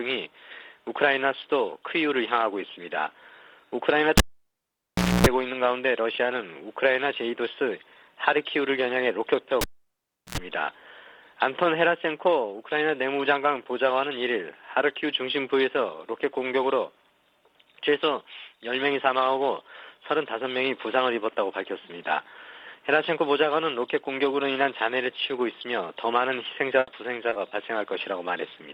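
At 4.18 s a cable is pulled and plugged in: a pop, about 1.04 s of near silence while disconnected, then 270 ms of 60 Hz mains buzz as the tip touches, and a second pop by 5.27 s. The same cable pulled and plugged in fault repeats at 9.61 s, with about 0.71 s unplugged and a shorter 83 ms buzz before the return at 10.38 s.

At 26.79 s a burst of packet loss removes 80 ms of audio. The receiver extends the last sound and fades it, so that section is replaced by a decaying fill and playback resumes later at 26.89 s.

Short concealed packet loss follows at 27.29 s, 27.33 s and 27.49 s. Each 20 ms hole is bridged by extrapolated signal and then blended back into the audio, heard as a brief smear or wobble. The first two are back to back and merge into one blemish of about 80 ms.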